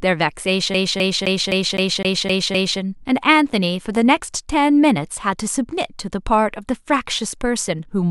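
A scratch keeps throwing the laser back one track, so the CD is stuck on one turn from 0.74 to 2.80 s. The same 0.26 s slice of speech plays eight times, each jump marked by a brief mute, giving a fast, even stutter.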